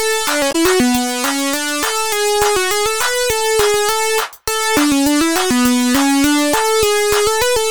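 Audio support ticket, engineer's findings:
Damaged data in a compressed stream, 0.49 to 0.56 s: short garbled burst of about 70 ms. Corrupted bytes in the encoded stream make the decoder misread those frames, lose sync and hunt for the next valid frame header. Component: decoder input.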